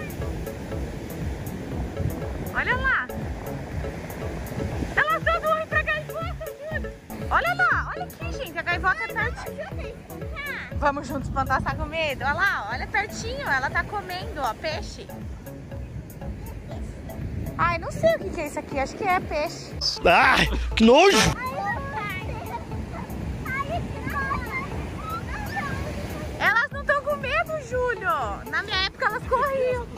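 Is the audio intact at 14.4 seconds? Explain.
No. At 14.44 s there is a single sharp click, most likely from dropped samples. A tiny stretch of the stream, well under a millisecond, has gone missing. The waveform therefore leaps from one value straight to a later one instead of moving smoothly between them. That sudden step is what produces the click. Nothing audible is removed, since the gap is far too short. On a spectrogram it shows as a thin vertical line at that instant.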